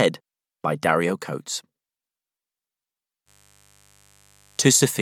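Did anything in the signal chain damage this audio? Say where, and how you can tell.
Yes: mains buzz enters in the analogue wiring at 3.25 s and runs to the end at 5.01 s. It is a steady, raspy buzz roughly 35 dB below the signal, built on 50 Hz harmonics extending into the kilohertz range, from switching spikes twice per mains cycle.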